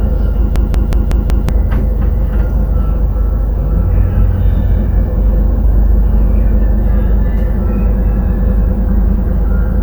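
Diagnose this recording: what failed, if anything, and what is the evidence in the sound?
A system hang loop at the driver or buffer stage: the host froze while the hardware kept replaying its ring buffer. From 0.56 to 1.49 s, one 186 ms slice repeats five times at 5.4 Hz, a machine-gun stutter that fits an 8192-sample buffer, and about a second of sound is lost.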